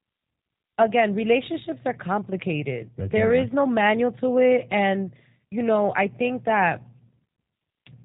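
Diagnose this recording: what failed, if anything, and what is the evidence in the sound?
The codec stage is at fault: the speech went through G.729 coding for its full length. Nothing above 3.8 kHz survives, and the speech is plainly rough and synthetic, rebuilt from a vocal tract filter, pitch predictor and sparse pulses, which fits an 8 kbit/s stream.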